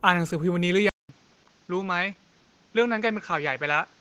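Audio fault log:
Throughout: Opus voice compression at 16 kbps in hybrid mode, 20 ms frames; coarse excitation leaves speech hoarse, slightly robotic, with smeared, blotchy upper bands on a spectrogram.
0.89 to 4.00 s: input switched to a poorer device, likely; 200 ms silence gap, then level drops about 5 dB, spectrum cut off near 7.3 kHz, new noise floor about 35 dB down.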